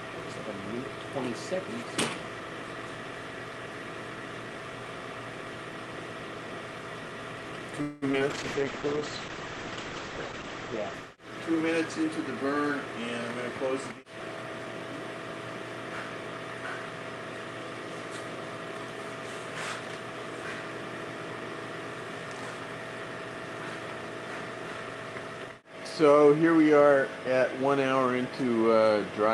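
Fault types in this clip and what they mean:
Call audio freeze: From 7.81 to 8.04 s the sound stalls and the last bit gets stretched out as a fading fill for about 0.2 s. Nothing is lost. The stream just picks up where it stopped, a bit later. That's likely packets held up in transit with the jitter buffer running dry.
Short concealed packet loss: Right after that, at 8.12 to 8.15 s and 8.19 to 8.22 s, about 20 ms of audio never made it each time. The receiver patched the holes by extending what came before, so you get two quick smears or wobbles.
Call bitrate drop: From 8.31 to 12.50 s the encoder gets squeezed from 40 down to 9 kbps and sits at the bottom for about 2.1 s. Bandwidth falls from 20 kHz to 8 kHz, so the sound goes muffled and rough until it recovers.
Jitter buffer speed-up: The buffer overfilled after that stall, so the receiver trimmed short pitch-period chunks to catch up. 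From 12.36 to 12.94 s it runs at 109% speed and drops around 50 ms. From 13.50 to 14.81 s it runs at 110% and drops around 150 ms. The pitch stays the same, but it sounds hurried.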